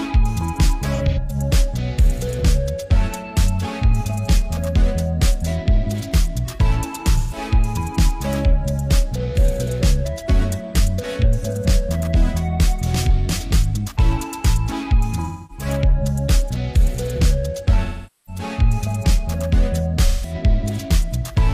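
AAC frame loss with concealment shows up at 0.95–1.35 s, 7.18–7.37 s, 15.24–15.65 s, 17.84–18.42 s and 20.06–20.34 s. Each time the decoder papers over missing frames by reusing the last good spectrum, so you get a smeared, noisy, phasey blur, longest near 18 s.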